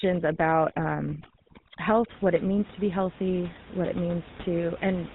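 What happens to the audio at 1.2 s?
Lost GSM frames disrupt the audio from 1.1 to 1.22 s. The decoder covers the single lost frame by repeating the last good frame's settings. The sound is held as a rough, metallic ring rather than breaking into silence like a plain dropout. The GSM full-rate codec's buzzy roughness and 4 kHz ceiling, present throughout, are also heard here.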